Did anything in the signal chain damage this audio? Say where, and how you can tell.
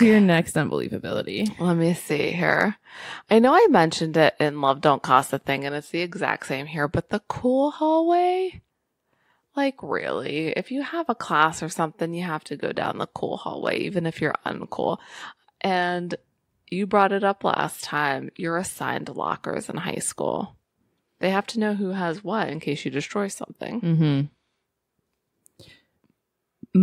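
No, nothing along the chain seems to have harmed this speech recording, and I can't point to any stage that left a mark on it.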